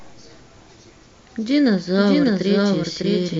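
A speech clip with a doubled audio track running throughout: a second full-band copy of the speech trails the first by roughly 0.7 s, at about the same loudness, with no decay or room colour, so it reads as a flat duplicate rather than an echo. On a waveform each syllable envelope appears twice, evenly spaced; a spectrogram shows the same harmonic patterns repeated, shifted right. The likely cause is the signal being captured again through a slower path.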